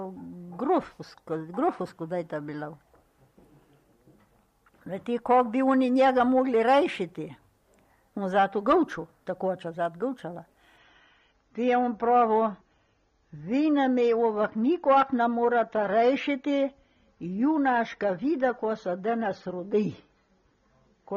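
An adaptive stream at a lower bitrate takes over at 10.78 s and holds to the end. The player switched to a cheaper version of the stream mid-play, with no gap, so the quality drops at once: everything above 6.9 kHz vanishes, dulling the top end, and coding artefacts thicken into a smeared, watery texture. The change is consistent with a move from around 96 kbit/s down to roughly 24 kbit/s AAC.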